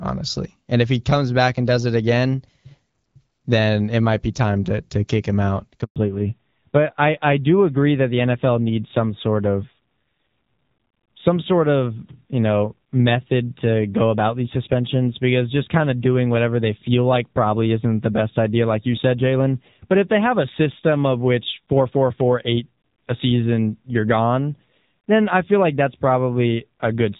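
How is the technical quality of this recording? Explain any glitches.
The recording has two linked faults: a brief dropout and a lasting loss of bandwidth, both around 5.9 s. Before that, the HD Voice (AMR wideband) coding sounds clear, with only light codec colouring.

Handover gap, 5.84 to 5.96 s: The speech dies away within a few tens of milliseconds into 120 ms of silence. This happens when a call is passed between networks and no speech frames arrive during the switch, so whatever was said in that window is simply missing.

Fallback to narrowband, from 5.96 s to the end: The speech turns duller, boxier and rougher, with nothing above 4 kHz. The call has dropped from AMR wideband to a narrowband codec, and the coarser texture fits AMR-NB at around 7.4 kbit/s.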